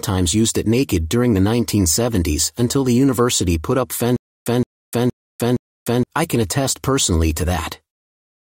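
A speech clip with a stutter with silent gaps from 4.16 to 6.03 s, right after "university put up" and before "I can attest personally": a short 168 ms burst of sound repeats four times, each followed by about 300 ms of dead digital silence, giving an even pulse roughly every 0.47 s. The likely cause is a stalled player or stream replaying its last buffered fragment at each retry, so the audio meant for that stretch is lost.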